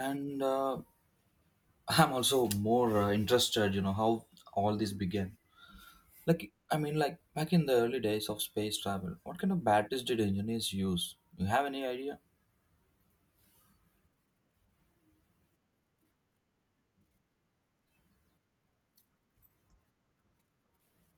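A speech recording with no technical faults to report.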